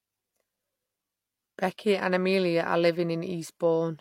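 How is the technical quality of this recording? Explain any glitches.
The quality is limited by a single fault that runs through the whole speech clip, from start to finish.

Low-bitrate audio saved at a high bitrate: nothing is present above 16.3 kHz, and the smeared, watery texture of heavy perceptual coding stays audible throughout. The cause is likely a low-bitrate encode, consistent with HE-AAC around 32 kbit/s, later re-saved as a roomy MP3 near 200 kbit/s. The second encode preserves the damage faithfully but cannot restore detail the first one discarded.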